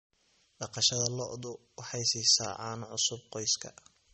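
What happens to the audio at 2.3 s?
MP3-style compression damage is present at 2.3 s and across the whole clip. Nothing sounds above about 8.3 kHz, and weak spectral detail flickers from frame to frame, giving a plainly watery, swirly quality to the speech. This likely comes from a low MP3 bitrate, around 32 kbps.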